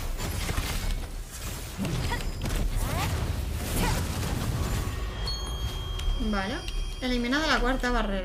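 From 5.05 s to the end of the clip at 8.24 s, a thin, steady whistle sits behind the sound at 3.2 kHz. It stays about 20 dB below the main signal and swells and fades slowly in level. This is a feedback whistle. The likely cause is a loudspeaker-to-microphone loop poised just at the edge of feedback. One high frequency keeps recirculating and sustaining itself, but it never builds into a runaway howl.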